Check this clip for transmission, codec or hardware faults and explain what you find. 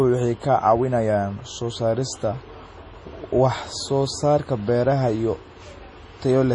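One codec fault runs through the whole speech clip. Throughout, the sound is watery and swirly, with metallic chirps on s sounds and nothing above 10.5 kHz. This is likely heavy MP3 compression, consistent with about 32 kbps, where weak frequency lines drop out frame by frame.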